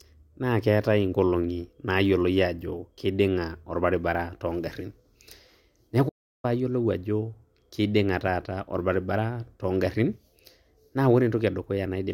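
A speech clip with a playback stall: the sound cuts to silence at 6.08 s and stays dead for about 350 ms, resuming at 6.45 s. The gap most likely comes from the player running out of buffered data or its output thread being blocked.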